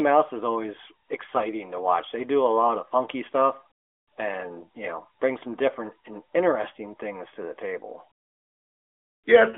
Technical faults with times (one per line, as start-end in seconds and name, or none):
none